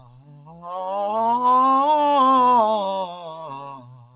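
Throughout the music, a noise suppressor built for speech stays active. It treats sustained tones and tails as noise, so the level swings by around 15 dB. Unlike a compressor, it reacts to steadiness rather than loudness. From 0.0 to 0.68 s, held material is cut by the noise suppressor by up to about 14 dB, sounding thinned while attacks mostly pass through. From 3.07 s to the end, the same cut deepens to about 17 dB, and decays are chopped short. Because it keys on steadiness rather than level, this differs from a gate. Over the call path, the band stops at 4 kHz, which fits G.711 mu-law.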